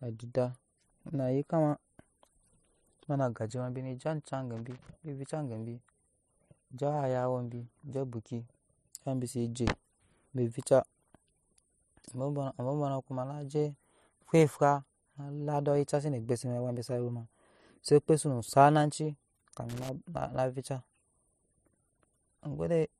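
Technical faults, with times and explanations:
4.57 to 4.89 s and 19.69 to 19.89 s, loose connector crackle: the speech is chopped by an irregular burst of scratchy crackle as a worn contact makes and breaks. Its ragged, uneven texture sets it apart from regularly spaced digital clicks or clean dropouts.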